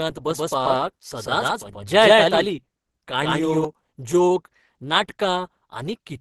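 From the start the whole clip carries what is likely Opus compression. The speech sounds hoarse and somewhat muffled, with a grainy, rough texture rather than swirling, and nothing is present above 12.1 kHz. That combination points to the encoder running in its hybrid speech mode at a super-wideband setting, which fits a low rate around 16 kbps. At that rate the codec fills bands from folded or noise-like content, and the damage is plainly audible.

From 0.31 s to 3.65 s a doubled audio track sits over the speech. A second full-band copy follows roughly 150 ms behind, at about the same level as the original, so every syllable gets a distinct echo with no decay or room colour. The copy appears and disappears abruptly at those two points. The likely cause is the same signal reaching the mix twice, once through a slower capture path, with the two versions left out of step.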